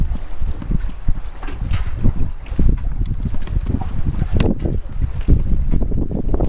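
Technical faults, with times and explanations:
Nothing technical to flag here; I couldn't hear a single fault anywhere in the clip.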